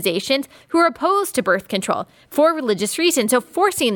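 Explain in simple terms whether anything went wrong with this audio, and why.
Nothing went wrong with this recording. The speech comes through steady, with no dropouts, clicks, distortion or glitches anywhere along the way.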